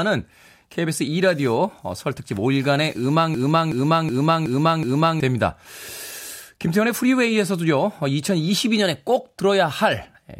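From 3.34 to 5.20 s there's a system hang loop: the system froze and a 372 ms chunk, fitting a 16384-sample buffer, stutters five times.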